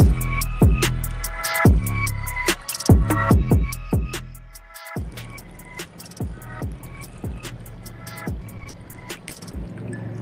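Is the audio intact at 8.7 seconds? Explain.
No. From 8.57 to 9.55 s the stream suffers repeated packet loss (robotic sound). Audio arrives late or not at all over and over, and each hole is patched by extending the last sound that did arrive, with the next dropout following close behind. The gaps are short, none longer than 40 ms, and together about 200 ms of that one-second stretch is filled-in sound, roughly a fifth of it. At 8.7 s this comes through as choppy, robotic audio with pieces missing.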